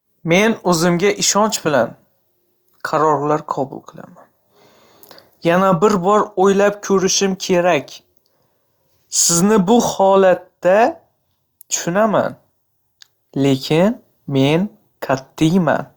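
No technical fault can be heard anywhere in the speech recording. There is nothing in it that needs a time mark or further comment.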